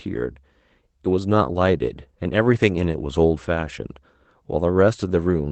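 At 2.03 to 2.07 s there is a short concealed packet loss. About 20 ms of the speech never reached the decoder in time. The receiver covered the gap by extending the sound just before it for roughly 19 ms, then blended back into the real signal. It is heard as a brief smear or wobble in the speech. The audio runs through a call codec whose top end stops near 8 kHz, consistent with Opus at a modest bitrate.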